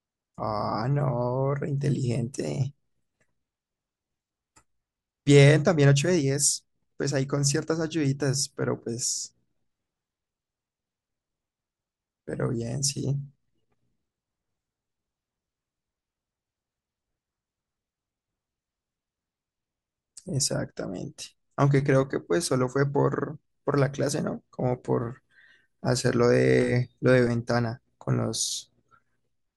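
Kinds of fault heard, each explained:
No technical fault can be heard in the speech signal at any point.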